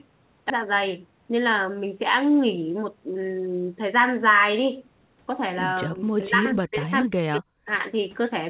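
At 0.50 to 0.52 s a stretch of audio was dropped while later audio was already waiting and playback jumped ahead, a skip ahead of about 0.4 s. About 0.4 s of speech is simply gone, and the two sides of the cut are spliced together with no gap or fill.

From 5.87 to 7.68 s the speech dips deeply, falling by as much as about 40 dB over roughly 1.5 s in total. This is likely speech suppressed in double talk, where the echo canceller mistook the talker for loudspeaker echo.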